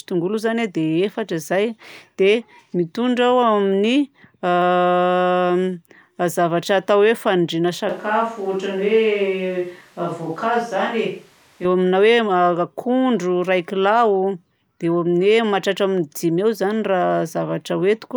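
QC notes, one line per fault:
7.89 to 11.65 s, switch to a distant microphone: the voice suddenly goes roomy and hollow, thinner in the bass, drops about 5 dB and picks up room noise around 35 dB below it. Likely the close mic dropped out and a farther one took over, then it snaps back.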